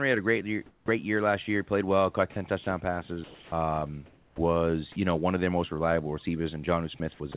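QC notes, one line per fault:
0.66–0.88 s, comfort noise in place of the background: between "had a great year" and "year last year", 220 ms of real room noise gives way to smoother synthetic noise about 8 dB quieter, likely from discontinuous transmission. Unlike chopping, only the pause is affected.
0.85–0.88 s, onset clipped by the voice detector: the first 30 ms of "year last year" are missing and filled with comfort noise, so the word starts abruptly. The detector likely reacted late once, cutting only the leading edge, not opening holes inside the speech.
2.32–4.96 s and 6.98–7.34 s, sound chopped by the voice detector: the detector toggled repeatedly, likely opening gaps filled with comfort noise, about 700 ms in total after "well caught" before "you know one of", then 100 ms near the end. Unlike an onset clip, there are multiple holes mid-stretch.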